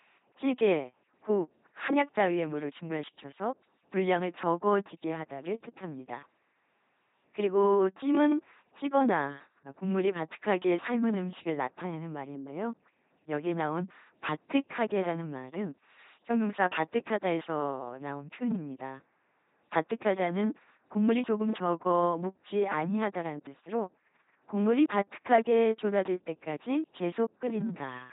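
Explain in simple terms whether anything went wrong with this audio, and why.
Something did go wrong. The whole speech clip, from start to finish, has been through an LPC-10 vocoder, and the damage is heavy. This kind of codec doesn't keep the real voice. It rebuilds each moment from either a buzzy pulse or plain noise pushed through a simple vocal-tract filter, calling every instant fully voiced or fully unvoiced. That's why it sounds like a mechanical robot, with nothing above 3.8 kHz.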